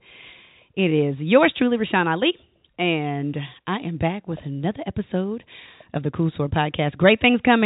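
Speech carried over a call path whose band stops at about 4 kHz, which fits a G.711 mu-law connection at 64 kbps, with no technical faults to be heard anywhere in the clip.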